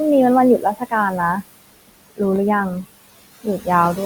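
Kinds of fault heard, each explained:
Noise suppressor artifacts: Throughout the clip, the suppressor tracks what it takes for steady background and lowers those frequency bands frame by frame. The room noise, about 15 dB below the speech, sinks in the gaps and rises again under speech, leaving an unsteady processed residue.
Speech cut by the noise suppressor: Between 0.58 and 0.93 s, the suppressor mistakes part of the speech for noise and turns it down with the background, by about 20 dB at its deepest. Roughly a fifth of a second of speech sounds swallowed and faint.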